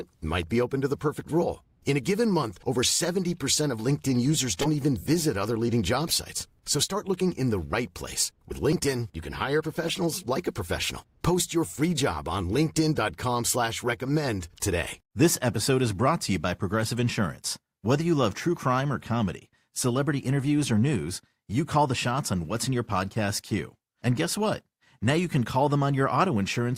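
Damaged compressed frames were decoded anyway (corrupt frame decoded), misplacing energy in frequency and producing brief chirps and noise bursts in the speech at 4.61–4.68, 6.07–6.10, 9.84–9.98 and 16.85–16.90 s.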